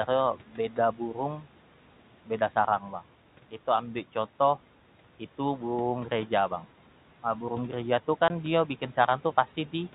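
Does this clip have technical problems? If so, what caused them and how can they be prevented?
Yes. Between 0.36 and 1.17 s, parts of the speech sound swallowed and faint, dipping by up to about 10 dB for around a third of a second in total. This is speech cut by the noise suppressor: it mistook quiet speech for the room noise, which sits about 20 dB below the voice, and turned it down along with that noise. Tuning the suppressor less aggressively, or giving it a better speech-presence detector, would prevent this.

From 8.28 to 8.30 s there is a 20 ms hole of dead silence with hard edges. This is packet loss filled with silence. The length suggests a single lost 20 ms packet that the receiver replaced with silence instead of concealing it. Enabling packet loss concealment, with a jitter buffer or forward error correction, would prevent the gap.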